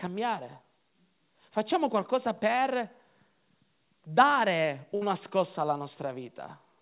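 At 2.56 to 2.59 s there is a short concealed packet loss. About 20 ms of the call did not reach the decoder in time. The receiver covered the hole by extending the sound just before it, then blended back into the real signal. The patch runs for about 12 ms. It is heard as a quick smear in the speech, a wobble rather than a clean gap.

From 4.95 to 5.03 s comes a burst of packet loss, ending just before "scossa alla". Several packets in a row were lost or arrived too late to play. About 60 ms of speech is gone. The receiver filled roughly 61 ms by carrying the last sound forward and turning it down as the gap went on. It sounds like a brief held, fading sound. Then the speech jumps ahead, with the lost part missing. Throughout, the narrow G.711 call band leaves nothing above 4 kHz.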